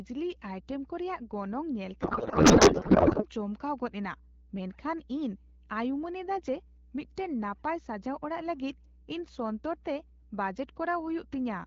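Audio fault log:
throughout mains hum: a steady 60 Hz tone with low harmonics sits under the speech at about 20 dB below it, the kind of coupling a ground loop or nearby transformer puts onto the line, so it never lets up between phrases.
2.01 to 3.25 s codec payload misread: the speech gives way to garbled noise and warble that barely tracks it. The decoder is reading octet-aligned AMR frames as if they were bandwidth-efficient, so every field lands in the wrong place, and the sound comes back at 3.25 s once the two sides agree.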